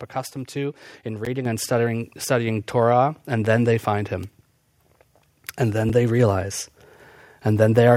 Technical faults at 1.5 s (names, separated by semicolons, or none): microphone volume stepped up